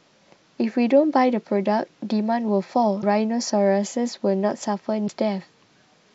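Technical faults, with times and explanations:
2.99–3.04 s and 5.06–5.10 s: damaged data in a compressed stream. Each event is a short burst of roughly 40 ms in the speech, heard as a chirp or blip. Part of the encoded data there is wrong, so the decoder cannot parse those frames correctly. It outputs garbled spectral content or discards the frames, loses frame sync, and resumes only when it finds the next valid frame header.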